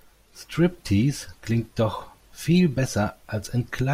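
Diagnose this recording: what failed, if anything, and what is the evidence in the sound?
Nothing in the recording points to a failure at any stage of the chain. Listening through the speech turns up no event that calls for a diagnosis.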